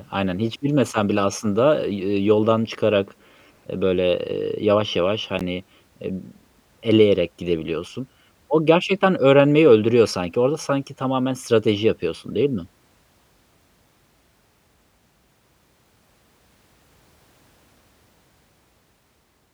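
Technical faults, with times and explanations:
5.39 s, block of digital silence: right after "ııı yavaş yavaş", about 15 ms of the speech signal drops to silence and returns with no fade. The hole is brief enough to be heard as a tick or dip rather than as silence.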